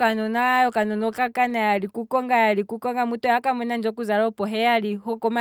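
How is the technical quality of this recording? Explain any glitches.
Nothing stood out as a technical problem when listening to this speech recording.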